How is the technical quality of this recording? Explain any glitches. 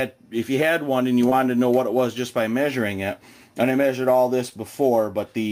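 Two brief glitches, at 1.29 to 1.33 s and 4.49 to 4.54 s, each a short smear where the sound briefly stretches out. Both are short concealed packet loss: about 20 ms of audio never arrived in time, so the decoder extended the preceding sound to bridge the gap before blending back into the real signal.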